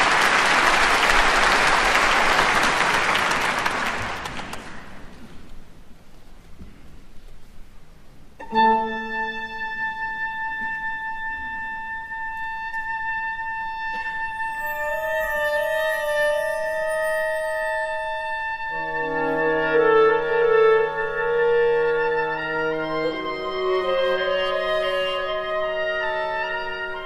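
No technical faults can be heard anywhere in this recording.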